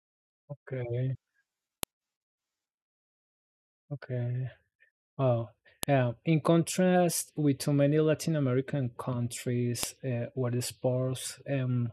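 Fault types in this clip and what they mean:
File header played as audio: sharp, loud clicks at 1.83, 5.83 and 9.83 s, just before "uh where the", each opening a 4-second piece whose unstripped header bytes play as samples.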